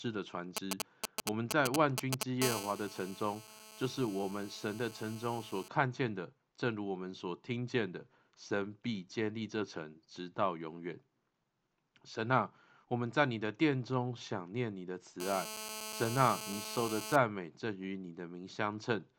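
From 0.57 to 2.23 s, GSM signalling bursts from a nearby 2G handset break into the speech as a galloping dit-dit-dit of brief buzzes, roughly as loud as the speech itself. The phone is sending short groups of radio pulses while it signals to the network, and the audio circuitry rectifies that RF energy into audible buzzes. Each group carries the 217 Hz burst rate.

Between 2.42 and 5.68 s, and again from 15.20 to 17.16 s, the pattern becomes a continuous GSM phone buzz. This is a hard, raspy 217 Hz tone rich in harmonics that bears no relation to the speech. It sits about 11 dB below the speech in the first stretch and about 7 dB below in the second. Here the handset is in a call and transmitting steadily, so the rectified pulse train holds a nearly steady drone through each stretch.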